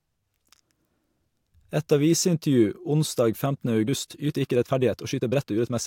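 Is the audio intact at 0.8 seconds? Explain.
Yes, the audio is intact at 0.8 seconds, with no fault at that moment.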